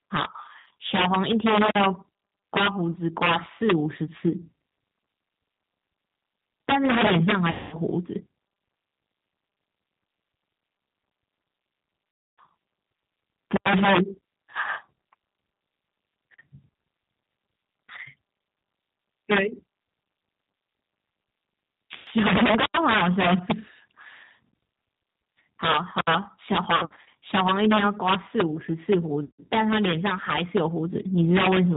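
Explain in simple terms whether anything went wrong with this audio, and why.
The call went through the G.729 codec, a low-rate phone-line compressor that rebuilds speech from a rough model of the throat and a few pulses rather than sending the actual sound. Everything above 4 kHz is thrown away. Here that damage is plainly audible: the speech stays understandable but sounds dull, slightly rough and a little artificial, like an older internet phone call, for the whole clip.

Pieces of the call also went missing in transit. This is VoIP packet loss concealed by the speech codec. When data failed to arrive, the decoder guessed by stretching its last bit of sound and letting it fade. This happens at 0.60–0.66 s, 7.51–7.77 s, 12.17–12.41 s, 21.96–22.06 s, 26.76–27.08 s and 29.24–29.41 s. The longest gaps are roughly a fifth to a quarter of a second, near 7.5 s and 12.2 s. At those moments the speech smears into a buzzy or hissy tone that fades away, and it sounds weak or distorted for a short while after the real signal returns. 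Around 26.8–27.1 s the losses come as several small scattered dropouts, so the sound stutters there rather than going blank once.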